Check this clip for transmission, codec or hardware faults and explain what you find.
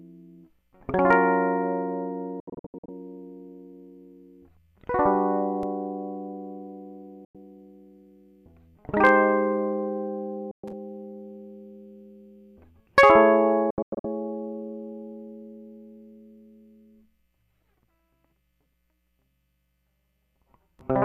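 The music has two faults: hard clipping and digital broadcast dropout.

Hard clipping hits three peaks: 1.11 to 1.13 s, 9.05 to 9.10 s, and 12.98 to 13.21 s. The level exceeds what a stage can pass, by about 2, 3 and 4 dB. Peaks are cut flat, adding high harmonics. Each sounds like a brief crackle.

Digital broadcast dropout mutes the music four times. The receiver loses good frames, fades out in 3 ms, and waits. At 2.40 to 2.89 s and 13.70 to 14.05 s there are clusters of short holes. Single gaps fall at 7.25 to 7.35 s and 10.51 to 10.64 s. The missing music does not return.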